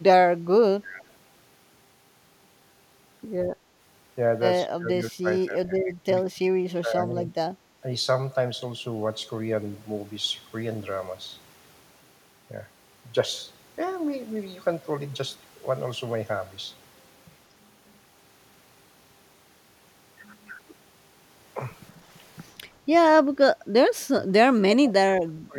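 Speech that sinks sharply in level at 0.79 to 1.04 s, 4.66 to 6.11 s, 6.29 to 7.32 s, 23.94 to 24.27 s, and 24.57 s to the end. Drops reach about 20 to 35 dB, deepest at the close. This is likely speech suppressed in double talk, where the echo canceller turned the talker down while the far end also spoke.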